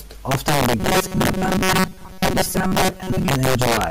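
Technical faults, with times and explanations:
Throughout: integer overflow. The level is pushed about 6 dB past full scale. Around three percent of samples exceed the limit and wrap to the opposite sign instead of being held there. Each wrapped peak jumps across the whole range, so loud moments crack violently, far harsher than clipping.
0.80 to 3.28 s: robotic sound from repeated short buffers. The speech turns into a rigid metallic buzz at 188 Hz while still loosely tracking the words. The likely cause is fresh audio arriving too rarely, so a chunk of about 5.3 ms is replayed over and over. Most of the real signal in this span is skipped, and the repetition rate imposes that fixed pitch.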